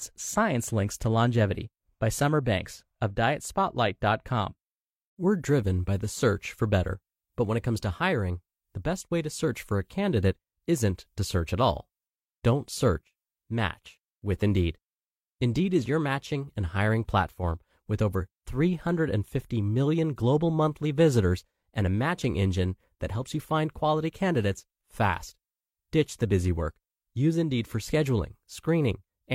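Nothing technical stands out in this bit of speech, so there's no fault to point to here.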